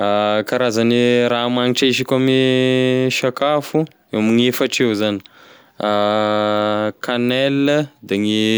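No technical faults can be heard anywhere in this speech recording. Nothing interrupts or degrades the sound at any point.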